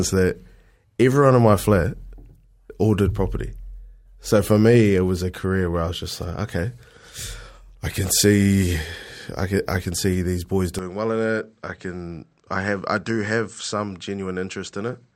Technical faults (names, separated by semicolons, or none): input switched to a poorer device